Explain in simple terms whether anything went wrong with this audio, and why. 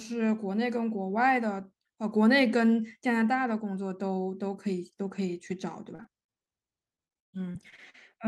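The speech turns choppy and broken from 5.95 to 6.53 s and again from 6.95 to 7.96 s. This is repeated packet loss (robotic sound): chunks of audio kept going missing, and each hole was patched by stretching the sound just before it.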